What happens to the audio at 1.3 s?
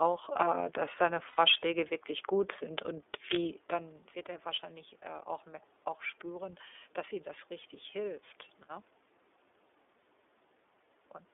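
Between 1.28 and 1.39 s, right after "äh dass deine", lost iLBC frames leave a gap of about 90 ms, which fits three 30 ms frames. The decoder repeats the last pitch cycle mixed with noise, so it sounds like a held, buzzy vowel. On a spectrogram, frozen harmonic bands with a noisy haze appear until "wirklich gut sind und" resumes cleanly.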